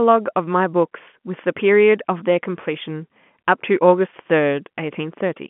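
Nothing goes wrong anywhere in this speech; it just sounds like an ordinary phone call, with the top end closing off around 3.4 kHz the way telephone audio does.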